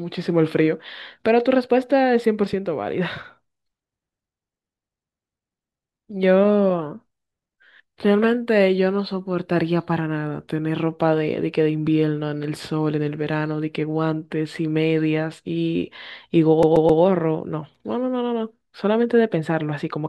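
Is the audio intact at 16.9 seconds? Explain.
No. From 16.63 to 17.02 s a 132 ms slice stutters three times with brief mutes: a CD stuck on one turn, the laser jumping back each rotation.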